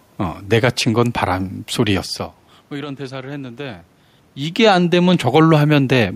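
Listening to this speech recording, nothing technical stood out; the background noise of the room and the shifts in level around 2 s and again around 4 s, as the talker moves relative to the microphone, belong to the recording itself.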